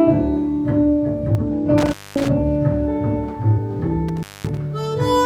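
At 1.35 to 1.40 s there is damaged data in the compressed stream. The decoder hits corrupted frames, loses sync and hunts for the next header. It comes through as a brief chirp, squawk, click or hole, and the sound may jump ahead.

From 1.78 to 2.28 s an intermittent contact breaks the signal. A loose plug or cable opens for about 225 ms. The sound drops out, with crackle at the edges and hiss while the line is open.

At 3.53 to 3.58 s the stream damage returns. Again the decoder misreads frames and resyncs.

From 4.09 to 4.58 s the contact fails once more, opening for about 218 ms, with the same crackle and dropout.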